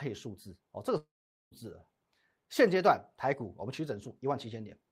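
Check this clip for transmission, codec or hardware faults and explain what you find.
One transmission fault stands out: a long network dropout from 0.97 to 1.54 s. The incoming stream most likely stopped delivering audio for over half a second, so the receiver had nothing real to play. Its concealment stretches the last bit of speech into a brief buzzy tail that fades quickly. Roughly 0.44 s of near-silence follows. When the speech resumes at 1.54 s, about 0.54 s of it is simply gone and never replayed.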